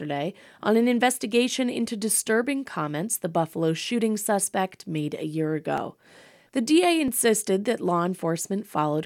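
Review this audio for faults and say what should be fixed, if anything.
A regular click or pop cuts through the speech every 1.31 s, starting at 0.56 s and recurring about seven times through 8.39 s. The steady spacing points to clock drift buffer slips: two devices likely running on independent clocks that disagree by something on the order of 700 ppm, so the buffer between them creeps until a block of a few dozen samples is dropped or repeated, producing each click. Lock both devices to a common word clock or use asynchronous sample-rate conversion at the interface boundary.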